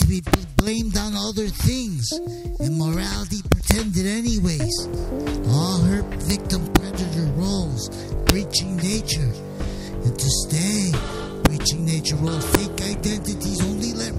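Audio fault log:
0.02–0.59 s, 3.52–3.71 s, 6.30 s, 6.76 s, 8.29 s, 11.45 s, 12.55 s: integer overflow. Peaks driven up to about 3 dB past the integer ceiling wrap to the opposite sign instead of being limited, so each sample jumps across the full range. The result is violent cracks, harsher than clipping.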